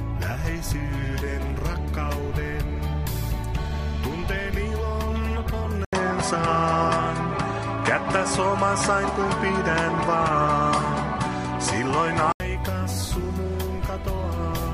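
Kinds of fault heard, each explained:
Input switched to a poorer device: at 5.85 s, after a silence of about 80 ms, the sound turns duller, with nothing above 10.7 kHz, a level shift of roughly 5 dB and a new background noise sitting well below the signal. The full bandwidth returns at 12.4 s. The likely cause is a change to a different microphone or headset profile. Unlike a filter or EQ change, the level, tone and noise floor all shift together.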